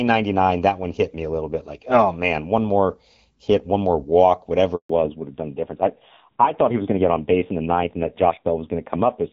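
At 4.75 s, just after "hit one more walk", the call underwent a handover gap: while the connection was passed from one network to another, no speech frames got through. The voice cuts off abruptly and a dead silence of about 140 ms follows, lasting until 4.89 s, when the new link begins carrying audio again. Whatever was said during that silence is simply missing.

From 4.89 s to the end, a fallback to narrowband takes over: the new link no longer carries HD Voice and drops to an older narrowband codec. Before this point the wideband coding has only slight damage, which fits a rate around 12.65 kbit/s. Afterwards there is nothing above 4 kHz, so the voice loses its crisp sibilance and air and turns duller, more muffled and rougher, which points to a low narrowband rate near 5.9 kbit/s.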